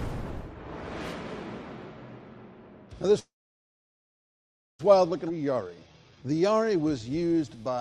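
At 3.19 s the sound stops and holds for 1.6 s until 4.81 s, about 1.5 s of it silent, then resumes where it left off: a call audio freeze, likely from delayed packets draining the jitter buffer. At 5.29 to 5.31 s a skip ahead drops roughly a second of audio, splicing the two sides almost directly together. From 5.31 s to 7.76 s a jitter buffer slow-down repeats short pitch periods, adding 346 ms and playing at 86% speed with unchanged pitch.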